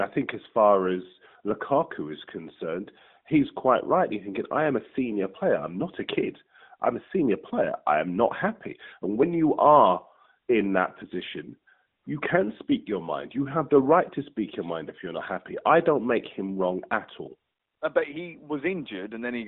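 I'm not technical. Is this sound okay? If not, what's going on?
No. At 9.23 s the sound skips: a tiny sliver, roughly a fiftieth of a second, drops out and the two sides butt together with no gap. This is most likely audio missing between chunks. The recording seems to be handled in 6-second pieces, and a scrap was lost while one piece ended and the next began. The narrow, phone-call tone comes from the AMR narrowband mobile codec working as a phone line normally does.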